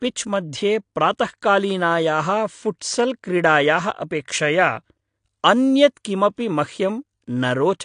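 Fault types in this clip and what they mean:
AAC compression (throughout): the speech stops dead above 9.8 kHz, sounding dull, with plainly audible codec damage. The likely cause is AAC-LC coding at a low bitrate, one that fits about 32 kbps, which discards the top band and coarsely quantises what remains.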